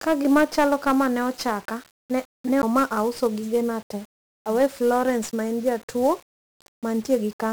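From the very start and all the way through, the speech carries heavy 1-bit DFPWM compression damage. With just one bit per sample nudging an adaptive level up or down, the coder can only roughly chase the waveform, and the error turns into loud broadband noise. The result is fuzzy and crackly, and the upper frequencies sink into a bed of hiss. The grit suggests a rate around 48 kbps.

At 2.62 s there's a CD skip. A knock or a flaw in the disc sent the laser off its track onto a different turn of the spiral, so playback mutes for a very brief moment, heard as a little tick or short gap, and then picks up from another spot on the disc. The speech lurches abruptly rather than flowing on, and it resumes with "ma auso gigena te".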